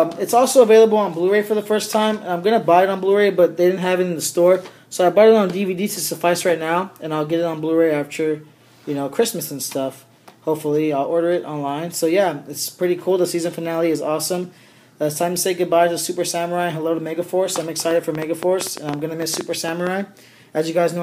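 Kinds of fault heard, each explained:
Train of clicks: From 17.91 to 19.88 s, about fifteen sharp pulses of similar shape tick over the sound. They come roughly 7 per second, unevenly spaced. They peak about 10 dB above the sound. Interference or a faulty connection is the likely source.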